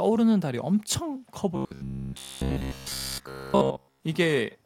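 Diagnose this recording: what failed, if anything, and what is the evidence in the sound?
Robotic sound from repeated short buffers, 1.56 to 4.03 s: the speech locks into a rigid metallic buzz near 66.7 Hz, likely a driver or buffer underrun looping roughly 15 ms chunks.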